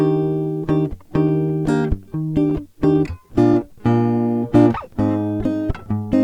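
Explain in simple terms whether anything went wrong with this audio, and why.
Between 1.27 and 1.91 s the music catches and drags in four brief hitches, none longer than about 13 ms. These are repeated stalls (stutter): data kept arriving late, the playback reserve ran dry, and the player stretched the last sound to cover each wait. Nothing is lost.

From 2.94 to 3.81 s the music plays at about 95% speed, with the pitch unchanged and sounds slightly drawn out, adding roughly 51 ms overall. This is a jitter buffer slow-down: the reserve was low, so the player repeated tiny slices of sound to build it back up.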